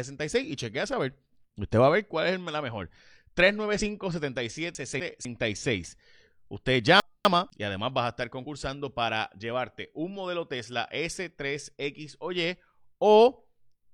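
A speech recording carries two kinds of fault. Brief chirps or blips at 1.21 to 1.24 s, 3.77 to 3.82 s and 8.41 to 8.46 s come from damaged data in a compressed stream: the decoder lost sync and jumped to the next intact frame. Garbled moments at 4.75 to 5.25 s and 7.0 to 7.5 s are chunks out of order, where a 250 ms chunk plays one chunk late, swapping places with its neighbour and leaving hard joins.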